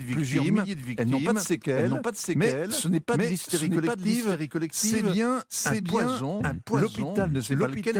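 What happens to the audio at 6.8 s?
At 6.8 s the speech is heard twice, a second equally loud full-band copy trailing about 0.7 s behind throughout: a doubled audio track, likely from a second, slower capture path.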